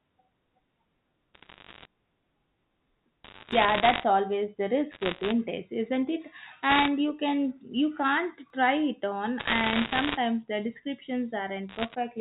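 Bit errors on a digital phone line put bursts of crackle over this telephone speech at 1.34–1.85 s, 3.24–4.04 s, 4.92–5.32 s (between "always the" and "isn't it"), 6.70–6.88 s, 9.39–10.17 s and 11.69–11.95 s. Bits flipped in the 8-bit G.711 A-law stream at a rate of roughly 1 to 2 percent each corrupt single samples. Hits on the sign or upper bits throw a sample far from its true value and produce sharp ticks, while the speech around them is unchanged. Audio missing between chunks is heard as two abrupt skips, at 3.52 s inside the second crackle burst and at 8.50 s between "you can you can't" and "try it on". Each drops about 20 ms and splices the two sides together with no silence between them. The skips fall about 5 s apart, which points to a recorder or processor working in 5-second blocks that likely loses a sliver of audio at each block boundary.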